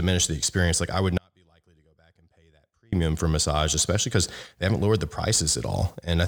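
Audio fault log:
1.18–2.93 s, audio dropout to a faint residue: the speech cuts off abruptly for about 1.75 s, leaving only a faint trace roughly 35 dB below its normal level, then returns just as sharply. The likely cause is a lost input feed while the following path stayed live.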